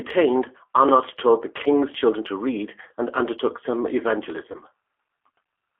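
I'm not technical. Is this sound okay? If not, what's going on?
No. Two things are going on. The whole clip has been through the G.729 codec, a compressed phone-call format that rebuilds the speech from a simplified model of the voice instead of sending the actual sound. That's why everything sounds narrow, like an old phone line cut to roughly 300 Hz to 3.4 kHz, with a slightly rough, synthetic edge. It's different from simple muffling because the voice itself sounds reconstructed, not just dulled.

Around 4.52 to 4.59 s there's a moment of VoIP packet loss concealed by the speech codec. A tiny piece of the call, about 20 ms and likely one lost packet, never arrived, so the decoder guessed by stretching the last bit of voice into a brief, fading sound. Unlike a plain dropout, you hear no silence or click. You hear a smeared blip, and the voice stays a little weak or warped for a moment afterward, until the decoder catches up.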